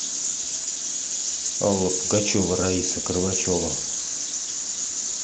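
No technical faults can be heard anywhere in this clip.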